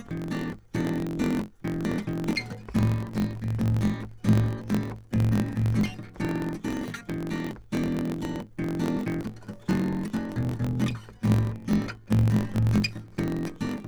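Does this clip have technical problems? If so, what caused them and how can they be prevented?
Yes. Throughout the music there is a block size mismatch (truncated): each block loses its tail, giving a 45.9 Hz buzz and playback running 1.07 times fast at near-normal pitch, which fits a stage writing 1024-sample blocks. Matching block sizes between stages prevents it.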